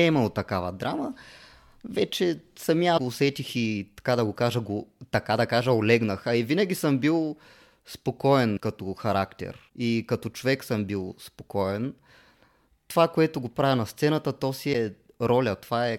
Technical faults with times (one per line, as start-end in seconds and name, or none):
2.97-3.00 broken MP3 bit reservoir
8.56-8.58 broken MP3 bit reservoir
9.68 broken MP3 bit reservoir
14.72-14.75 broken MP3 bit reservoir